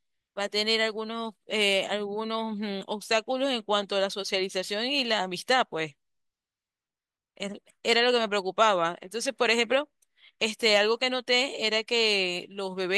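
No technical fault can be heard anywhere in this speech recording; the signal stays stable and intact throughout.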